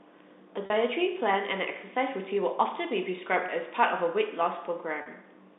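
A speech recording carried over a G.711 telephone line, so nothing below about 200 Hz or above 3.7 kHz comes through. It has three brief cases of packet loss with pitch repetition, at 0.66 s and 5.02 s (each about 40 ms, which fits two 20 ms packets going missing) and at 3.46 s (about 20 ms, one packet). The receiver filled each gap by repeating the last pitch period, so what you hear is a short, slightly buzzy hold on the voice. A plain dropout would leave a silent hole or a click instead.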